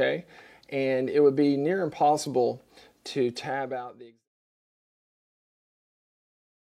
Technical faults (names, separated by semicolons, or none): none